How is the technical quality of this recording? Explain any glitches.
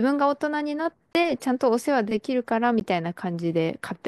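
The recording has two short dropouts, each a block of digital silence. The first runs from 1.13 to 1.15 s and lasts 20 ms. The second, about 15 ms long, comes at 2.80 s. In each, the speech stops dead and returns with no fade. The usual cause is audio samples replaced by zeros, often when the program fails to fill its output buffer in time. The second gap is brief enough to sound like a quick tick.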